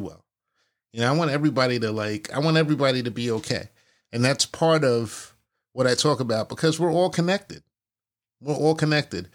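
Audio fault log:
No faults are audible anywhere in the speech.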